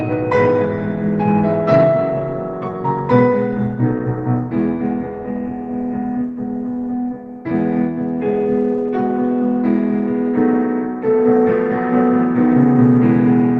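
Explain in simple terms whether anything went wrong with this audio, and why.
Nothing went wrong with this audio, because no fault can be heard anywhere in it.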